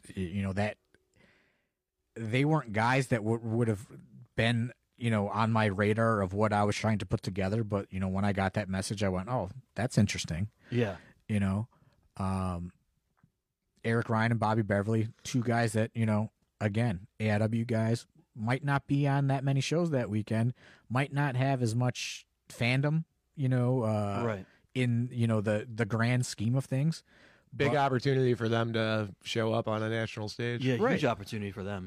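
A speech recording whose signal shows no audible technical faults anywhere in its duration.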